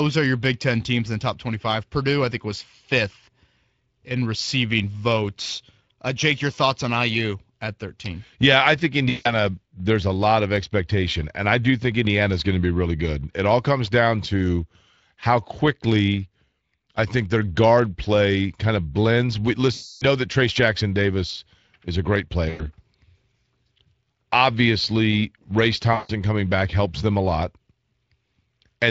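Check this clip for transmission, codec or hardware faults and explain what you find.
Two faults are present: Speex coding damage across the whole speech clip, and four short dropouts patched over by packet loss concealment.

Speex codec damage runs from start to finish. Speex is a CELP coder that models speech as a filter excited by a pitch and noise signal. The coarse excitation here leaves the voice audibly hoarse and grainy. The level of damage fits a Speex bitrate of roughly 20 kbps, where that excitation gets too few bits to sound clean.

VoIP packet loss concealed by the speech codec occurs at 9.09–9.31 s (between "I think" and "there's a lot of"), 19.73–20.05 s, 22.49–22.70 s (right after "is a great"), and 25.93–26.11 s (just before "coming back helps them"). When packets vanished, the decoder kept replaying its last pitch and filter at falling gain. Each gap therefore smears into a fading buzzy tone or coloured noise rather than silence. 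The longest gap, at 19.73 s, fits about fourteen lost 20 ms frames. Because each frame is built from the one before, the voice stays thin briefly after each gap.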